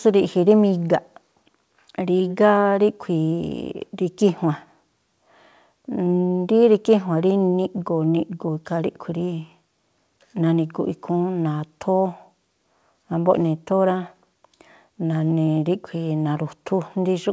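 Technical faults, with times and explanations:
No faults: the speech has passed through a call path whose wideband codec, likely G.722, leaves nothing above 8 kHz, as expected for that path.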